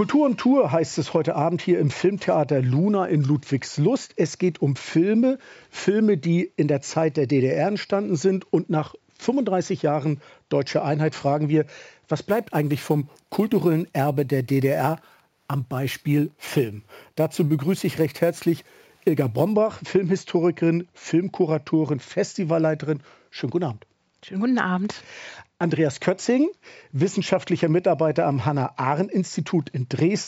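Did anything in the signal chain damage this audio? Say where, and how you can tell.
Yes. Between 12.29 and 19.53 s, a sample-rate conversion stage raised the rate by simply repeating each sample, with no interpolation or anti-imaging filter. This is imaging from sample-and-hold upsampling, and it fits a 16 kHz source raised to 44.1 kHz. Mirrored copies of the spectrum fill the 8 kHz to 16 kHz band, about 25 dB below the wanted sound. They add a bright, metallic fizz whose level tracks the sound and whose lowest image moves opposite to its pitch.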